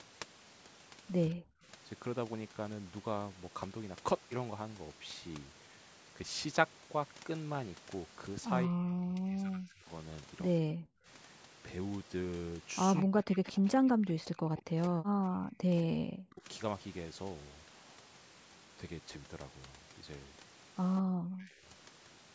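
The speech dips sharply at 1.3–1.65 s, 8.67–9.88 s, 10.6–11.08 s, 13.03–16.45 s and 21.01–21.67 s. Most drops are deep, about 40 dB. The one near 9 s is milder. This is likely speech suppressed in double talk. Both sides spoke, so the canceller turned down this side's voice along with the loudspeaker echo.

A faint, short copy of the sound appears at 12.96–13.03 s and again at 20.96–21.01 s. Each comes right before a dip. It trails the original by 178 ms. This is likely echo leak: loudspeaker sound slipped past the canceller and returned.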